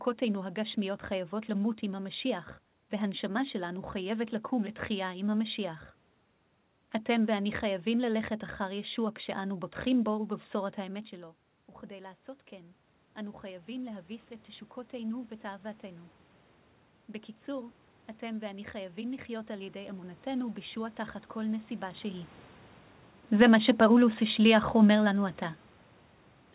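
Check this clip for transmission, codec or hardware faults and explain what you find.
One fault stands out, near the end of the clip. The speech is band-limited with nothing above 4 kHz, which fits a G.711 A-law call path at 64 kbps. The level changes around 11 s and 22 s sound like the talker moving.

Automatic gain falling, from 23.26 s to the end. The gain control judged the input too loud, or its background noise too strong for the gain it had. It pulled its gain down gradually. The speech sinks steadily in this stretch. The room noise sinks with it. That shared drop points to the gain stage, not the talker.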